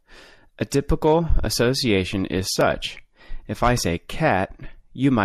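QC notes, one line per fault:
0.70 s, pre-echo: a short hiss, about 13 dB above the surrounding floor, precedes a sharp speech attack by roughly 15 ms, leaving the onset soft and smeared. The transform codec spread quantisation noise sized for the loud attack across its whole block, so the quiet moment before the attack is filled too. The smear fits a block of about 36 ms, and the codec evidently stayed on long blocks here rather than switching to short ones.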